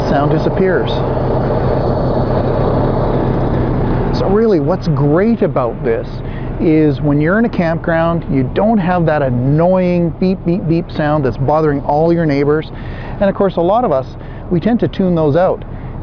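No faults can be heard.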